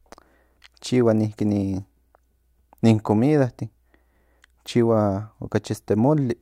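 No technical faults are audible anywhere in the speech recording.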